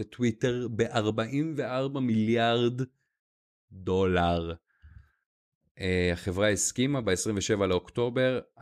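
No technical faults can be heard anywhere in the recording, with the signal staying steady and intact throughout.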